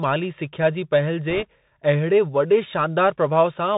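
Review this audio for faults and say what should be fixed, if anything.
The speech passes through a Bluetooth CVSD headset codec for its full length. Its one-bit delta coding, consistent with a 64 kbps link, blocks everything above 4 kHz, so the audio sounds thin. The adaptive step lags loud high sounds, giving scratchy sibilants and a granular hiss under the speech. Prevention: capture through a wideband path (mSBC or LC3) or a wired microphone instead of the headset profile.

Bit errors on a Bluetooth voice link occur from 1.30 to 1.43 s, just after "माली सिख्या जी पहल". The corrupted bits put a rushing crackle over that stretch, at an error rate of around one or two percent. Because each CVSD bit carries equal weight and its effect decays, there are no sharp clicks. Prevention: keep the headset close to the host and away from 2.4 GHz interference so the radio link stays clean.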